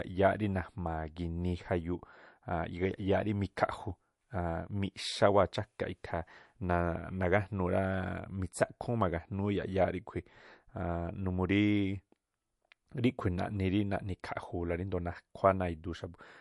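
A likely low-bitrate MP3 compression, around 48 kbps, cuts everything above 11.3 kHz throughout, leaving the speech dull, watery and swirly, with chirpy s sounds.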